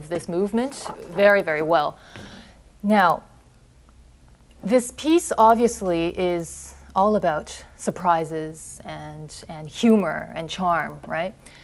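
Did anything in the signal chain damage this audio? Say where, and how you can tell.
Yes, at the sample-rate conversion stage: a resampler restarted on every block. Throughout the audio there is a steady ticking at 10 Hz, one tick every 100 ms, heard only while signal is present. The rate points to 100 ms blocks being converted from 24 kHz to 48 kHz independently. At each block edge the interpolation filter had no real neighbouring samples to draw on, so it produced a small discontinuity that repeats at the block rate.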